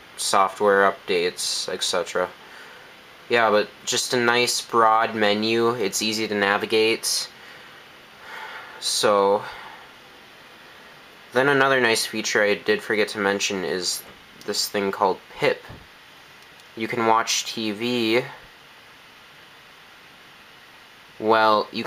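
No dropouts, clipping, noise bursts or other technical faults are audible anywhere in the clip.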